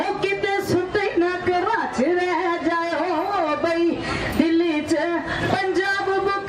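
Nothing is technically wrong with the audio; there are no faults to time or trace to a cause.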